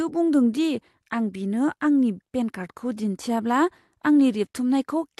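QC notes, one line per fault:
No faults found in this speech recording.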